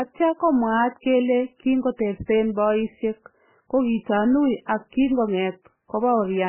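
An MP3 encoder starved of bits is the likely cause of the damage heard throughout this speech. Nothing survives above 3.1 kHz, and heavy, watery swirling as weak frequency lines flicker on and off between frames fits a bitrate as low as 8 kbps.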